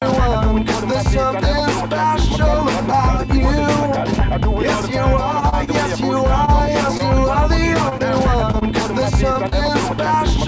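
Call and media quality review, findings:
Train of clicks, 2.24 s to end of clip. Regular ticking at 13.3 clicks/s over the sound and through the pauses, peaks a few dB above programme level. Uniform pulse shape and fixed rate point to a likely external source, e.g. equipment interference or a faulty connection or power supply injecting a periodic impulse.

Short stall from a late packet, 5.49–5.54 s and 5.64–5.69 s. Sound held too long with slight buzz or dip, roughly 30 ms and 28 ms of stretch. Jitter buffer ran dry when a packet arrived late. Receiver extended the last frame, then resumed in place. No audio lost, only timing distorted.

Short concealed packet loss, 6.45–6.49 s, 6.97–7.01 s, 9.33–9.37 s, 9.49–9.54 s. Brief smear or wobble at each. About 20 ms of audio never reached the decoder. Concealment extrapolated the preceding signal for 16–25 ms before crossfading back into real frames.

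Repeated packet loss (robotic sound), 7.89–8.63 s. Choppy, with pieces missing. Four gaps totalling 80 ms, longest 22 ms, about 11% of the span concealed. Successive losses patched by extrapolation in close succession. Throughout the clip: the WebRTC call path, consistent with G.722 wideband, with nothing above 8 kHz.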